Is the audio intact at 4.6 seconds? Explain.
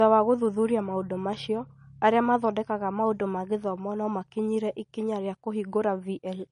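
No. At 4.6 s, as across the whole speech clip, the smeared, swirly artefacts of a coarse encode remain. This is likely low-bitrate audio saved at a high bitrate: the sound points to an MP3 near 40 kbit/s re-encoded near 209 kbit/s. Unlike a simple low-pass filter, the codec artefacts persist, and the later encode restores nothing.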